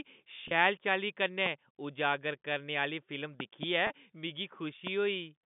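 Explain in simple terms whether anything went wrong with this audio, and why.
Yes, a few things went wrong. Twice the speech briefly sounds held and slightly buzzy, as if one sound were stretched for an instant: at 0.48 to 0.51 s and at 3.87 to 3.90 s. This is packet loss with pitch repetition. The call travels in small chunks, and each time one chunk of about 30 ms went missing. The receiving end filled the hole by repeating the last bit of voice it had, which is why it sounds stuck rather than silent.

There are also loud pops, sharp clicks or thumps on top of the speech, which carries on underneath. Single pops land at 1.46 to 1.48 s and 4.87 to 4.89 s, and a pair of pops comes between 3.40 and 3.65 s. They are likely caused by a sudden electrical jolt, such as a plug, a switch, static or a glitch in the sound hardware. That jolt adds a brief spike to the signal.

The narrow, phone-like tone comes from ordinary G.711 telephone coding. 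That is simply how a standard phone line sounds and is not a fault.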